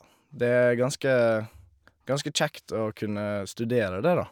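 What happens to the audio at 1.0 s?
Nothing goes wrong at 1.0 s; the speech carries on intact through that moment with no audible fault.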